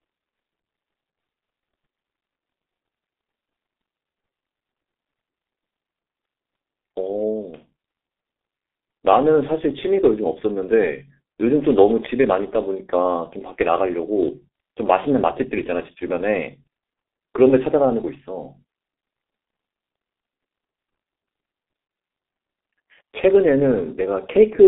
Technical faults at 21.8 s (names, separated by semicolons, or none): G.723.1 codec